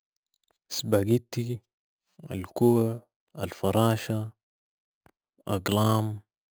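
Right from the start and all the way through, there's imaging from sample-and-hold upsampling in this speech. Someone raised the rate by just repeating each sample with no smoothing filter, which points to an original rate of roughly 11 kHz. That leaves mirrored copies of the spectrum, the first one landing between about 5.5 and 11 kHz at about 20 dB under the speech. You hear it as a bright metallic fizz that rises and falls with the talking.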